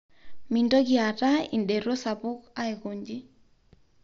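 No technical faults can be heard in the speech, which carries the expected character of a Bluetooth mSBC headset link, with content extending to about 7.6 kHz and nothing above, and only a light codec texture.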